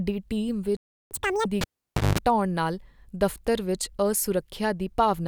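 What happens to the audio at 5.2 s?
At 5.2 s the speech carries on intact, with no dropout, click or other fault at that point.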